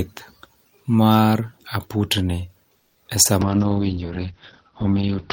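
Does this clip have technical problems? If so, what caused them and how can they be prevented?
Yes. From 2.77 to 2.97 s there is a call audio freeze, most likely because packets stalled in transit and the jitter buffer ran dry. For about 180 ms the receiver stretches the last sound into a fading buzz or hiss rather than going silent. When the late packets land, playback picks up exactly where it left off, so nothing is lost but everything after is pushed about 180 ms later. Prevention: give the jitter buffer enough headroom and prioritise call traffic on congested links.

At 3.23 to 3.27 s there is a short concealed packet loss. Roughly 20 ms of audio never reached the decoder in time, so it patched the hole by extending the preceding sound and then crossfading back into real audio. The result is a brief smear or wobble where those 20 ms are simply gone. Prevention: enable in-band forward error correction or redundancy so isolated lost packets can be rebuilt.

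From 3.42 s to the end there is a call bitrate drop. The bandwidth estimate collapsed and the encoder was pushed from 40 kbps down to 7 kbps, holding the lowest rate for about 1.9 s. At that rate Opus quantises coarsely and narrows the coded band from 20 kHz to 6 kHz, so the sound turns muffled and rough, losing its top end and crispness. Prevention: keep the uplink free of competing traffic and set a sensible minimum bitrate so the encoder cannot fall so low.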